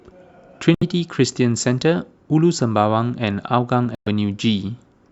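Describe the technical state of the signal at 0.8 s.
Bluetooth dropout from 0.75 to 0.83 s: likely late packets were discarded, leaving a flat waveform and an empty spectrogram column before the speech resumes further on.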